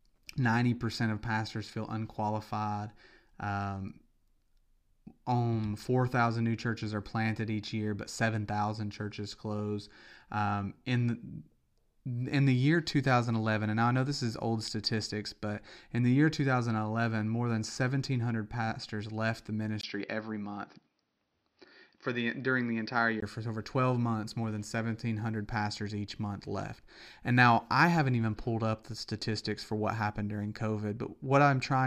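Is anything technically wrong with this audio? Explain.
Yes. From 19.81 s to 23.22 s, just after "pastors left the" and until "for over", the input was likely switched to a poorer device. That second input passes nothing above about 6.1 kHz, so the speech turns dull and boxy, with faint new background noise well under the voice. The level stays roughly the same. A brief 20 ms gap marks the switch, and the fuller sound returns at 23.22 s.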